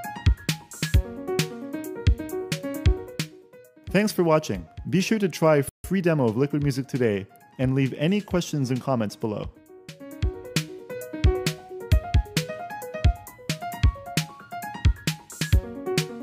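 At 5.69 s there's a rebuffering stall: the player ran dry, went silent for 150 ms until data arrived, then picked up exactly where it left off.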